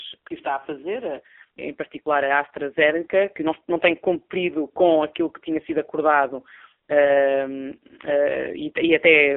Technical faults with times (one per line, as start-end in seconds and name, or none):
0.00-9.37 AMR narrowband mobile codec